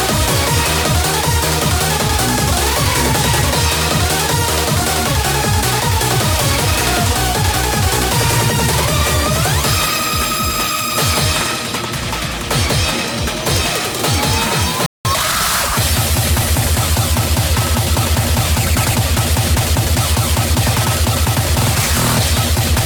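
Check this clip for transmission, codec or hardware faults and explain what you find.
There are two linked faults, both right around the 15-second mark, and they're the classic pair you get when a player falls behind and then scrambles to make up the gap.

First up is a playback stall from 14.86 to 15.05 s. The output just drops to silence for about 190 ms, mid-flow. That's long enough to register as a hiccup rather than a tiny dropout. The likely cause is the player running dry on its buffer or its output thread getting held up briefly, so nothing reached the speakers until it recovered.

Straight after, from 15.05 to 15.41 s, there's a time-compressed catch-up. Having fallen behind during the stall, the player trims its backlog by snipping out short slices and cross-fading across the joins. Here it runs at 1.5 times normal speed for a bit over a third of a second, so the sound feels rushed but keeps its pitch before things settle back to normal pace.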